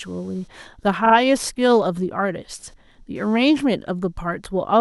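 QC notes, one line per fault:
Throughout: computer activity noise, a faint buzz with a pulse rate of roughly 300 Hz, about 40 dB below the speech, from computer load changes disturbing the shared audio ground.
1.05 to 1.14 s: repeated frames, a 40 ms block played twice more, so the speech stutters and runs 80 ms longer.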